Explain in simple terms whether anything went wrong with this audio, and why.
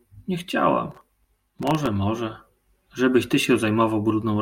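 From 0.91 to 1.87 s the speech is overlaid with gritty crackle, a processor overload crackle. The computer kept missing its deadlines for very short audio buffers, well under a millisecond each. Dozens of misses in a row each replayed a scrap of old audio with hard edges.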